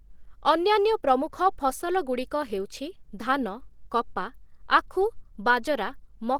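From start to finish the speech has a hoarse, muffled graininess, which likely comes from Opus compression at a low bitrate, something like 16 kbps. At that rate the encoder seems to run in its hybrid mode, coding the lower band as speech and filling the upper bands roughly, so the damage is plainly audible. The bandwidth hasn't collapsed, though: content still reaches up to about 20.2 kHz.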